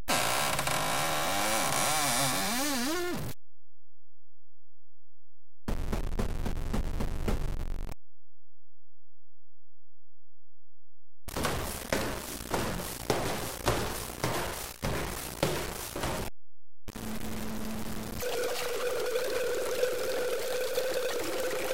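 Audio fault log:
Throughout: stuck bit. A harsh, buzzy distortion rides on the whole clip and follows the shape of the waveform. About half of the samples seem pushed off by a fixed step of about -30 dBFS. The likely cause is one data bit held at a constant value by a broken line or converter. Because that bit also flips with the sign of small values, quiet passages fill with a steady noise instead of falling silent.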